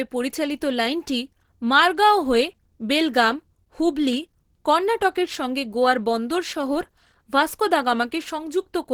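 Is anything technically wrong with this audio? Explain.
Yes. Opus compression artefacts run through the whole clip: the speech sounds hoarse, grainy and muffled, with plainly audible coding damage, though content still reaches up to about 20.2 kHz. This likely comes from Opus in its hybrid speech mode, which fits a low bitrate around 16 kbps.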